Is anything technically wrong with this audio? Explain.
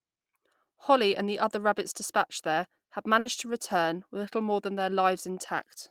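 Yes. A burst of packet loss occurs from 3.19 to 3.28 s, between "rabbits dispatched there have" and "to return with little". Several consecutive packets never arrived in time, so the receiver extended the last sound it had for about 60 ms, lowering its level as the gap continued. This is heard as a brief held buzz or hiss that fades. The speech then picks up again with about 60 ms of the original missing.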